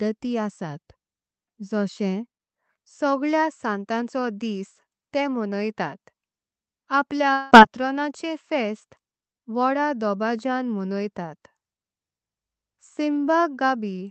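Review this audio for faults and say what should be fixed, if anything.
Long network dropout at 7.33 to 7.54 s, just before "पातरोणाचे फेस्ट". For about 0.2 s the sound smears into a buzzy, fading continuation of what came before, lasting roughly 175 ms, and then the audio resumes with about 180 ms of content gone, so the passage jumps forward. This is likely a stretch of packets that never reached the receiver, which covered the gap by stretching the last audio it had. The Opus call path adds its usual coding noise and a high-frequency ceiling at 8 kHz. To prevent it, stabilise the network link and enable forward error correction or redundancy so short losses can be recovered.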